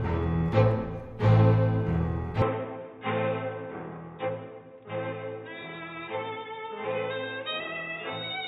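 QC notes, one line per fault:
2.42–8.47 s, input switched to a poorer device: the music abruptly loses everything above 3.8 kHz, with no gap at the changeover, turning dull and boxy. Level falls by roughly 5 dB and a faint new noise floor appears, likely from recording switching to a narrower-band input.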